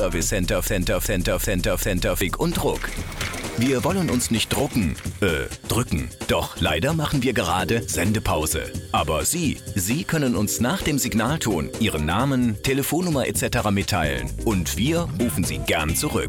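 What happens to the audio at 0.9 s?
At 0.9 s the audio is inside a broken-record loop from 0.67 to 2.21 s. One 385 ms fragment plays four times back to back, likely from a stalled player or stream resending its last buffer. A waveform or spectrogram shows identical blocks repeating every 385 ms.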